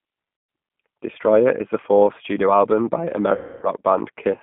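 Across the whole clip the speech carries the G.729 codec at 8 kbit/s, with damage that is plainly audible. The line passes only about 150 Hz to 3.5 kHz, and the voice has a rough, slightly synthetic grain because it is rebuilt from a vocal tract filter and a few pulses per frame. That grain is what separates it from simple telephone band-limiting, which would sound narrow but clean rather than buzzy.

From 0.37 to 0.49 s, VoIP packet loss concealed by the speech codec replaces about 120 ms of lost audio. The decoder keeps repeating its last pitch and filter at falling gain, so the sound smears into a fading buzzy tone or coloured noise. The loss returns from 3.35 to 3.68 s, covering about 270 ms, and here the stretched sound decays further and stays weak and distorted as packets resume. Both lost spans fit 30 ms packets. A plain dropout would leave silence or a click, not this decaying, held sound.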